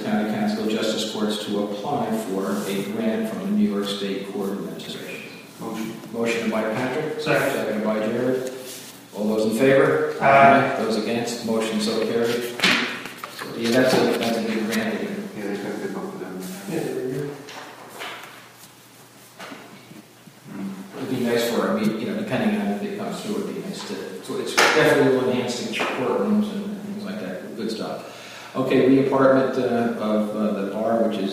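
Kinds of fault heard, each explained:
Frames out of order: at 4.79 to 4.94 s, two adjacent blocks of about 70 ms each, three frames apiece, play swapped. The stretch comes out as a garbled flutter, with no time lost.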